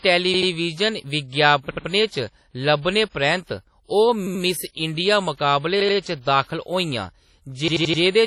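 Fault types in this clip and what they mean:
WMA compression, throughout: The speech carries heavy transform-codec damage: a ringing, washy quality where quantisation noise is smeared over tens of milliseconds around each sound, and a hiss that swells and fades with the signal. Nothing is present above about 15.6 kHz, and weaker detail has been dropped from the spectrum. The likely cause is encoding with an early WMA encoder at around 32 kbps, where long blocks and coarse quantisation produce exactly this smearing.
Repeated buffer, at 1.71 to 1.88 s, 4.27 to 4.44 s, 5.80 to 5.97 s and 7.68 to 8.02 s: Each time, a piece about 85 ms long repeats with a hard join at every restart, heard as a short stutter. The first three events repeat the piece twice more. The last repeats it four more times and so lasts longer. The length points to a 4096-sample buffer that the device replayed because fresh audio arrived late.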